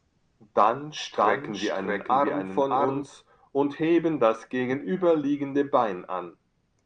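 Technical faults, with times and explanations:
1.17–3.03 s, doubled audio track: a second, full-band copy of the speech runs about 0.7 s behind the original at roughly the same loudness, so the talker seems to overlap an exact replay of themselves. The copy has no decay or room colouring, unlike a real echo, and it cuts in and out abruptly, ending just before "und heben das gegenüberliegende". The likely cause is the same audio captured again through a slower path and mixed in.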